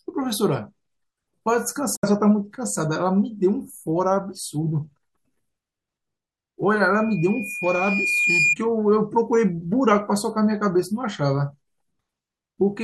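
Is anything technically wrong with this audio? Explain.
Yes, two faults are audible.

A digital broadcast dropout occurs from 1.96 to 2.04 s. The receiver lost valid frames and muted, fading out over 8 ms and leaving roughly a 64 ms hole, which fits two lost frames. The speech in that gap is gone.

A loudspeaker feedback squeal runs from 6.94 to 8.56 s. The microphone picked up its own loudspeaker, and at 2.4 kHz the loop gain exceeded one. That tone builds over about a second and a half into a squeal a few decibels above the speech.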